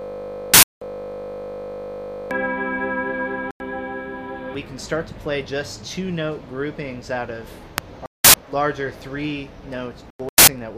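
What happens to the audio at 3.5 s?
A corrupt frame muted from 3.51 to 3.60 s: damaged compressed data was rejected by the decoder and replaced with silence, so the sound drops abruptly into a hole of about 94 ms, which fits roughly three frames, and then resumes without losing timing.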